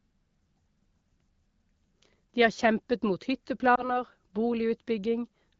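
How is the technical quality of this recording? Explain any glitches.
One glitch stands out, carried over an HD Voice call that sounds clear, with only light coding colour from AMR-WB at 12.65 kbit/s.

Just after "har kjempet mot", from 3.76 to 3.90 s, the speech briefly dips or warbles, then comes back weak or rough for a moment. This is lost AMR speech frames: one corrupted 20 ms frame was concealed by the decoder, which repeated the previous pitch and vocal tract settings at reduced gain until good frames resumed.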